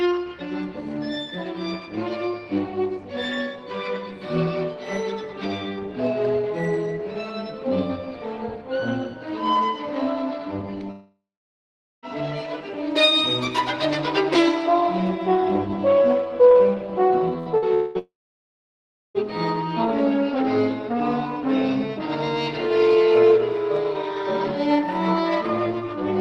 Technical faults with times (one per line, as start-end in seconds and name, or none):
10.91-12.05 long network dropout
17.38-17.49 burst of packet loss
17.58-17.65 short concealed packet loss
17.74-19.17 long network dropout